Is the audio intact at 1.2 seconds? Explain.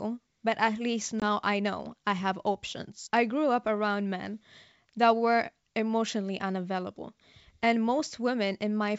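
No. Packet loss on an ADPCM call breaks the audio from 1.20 to 1.25 s. About 20 ms of sound drops out as a hard-edged silent gap, which fits the loss of a couple of packets. The decoder's adaptive predictor and step size then no longer match the sender's. So the speech comes back at the wrong level, or with a click and some distortion, before settling over the next tens of milliseconds.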